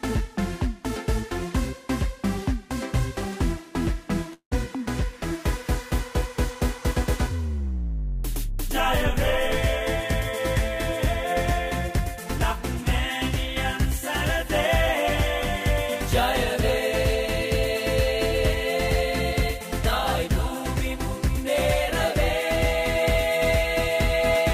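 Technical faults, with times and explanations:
4.33 to 4.53 s, call audio freeze: the last sound is stretched into a fading buzz that falls silent for about 80 ms, then resumes exactly where it stopped. Nothing is lost, unlike a dropout; everything after arrives about 181 ms later, likely from delayed packets draining the jitter buffer.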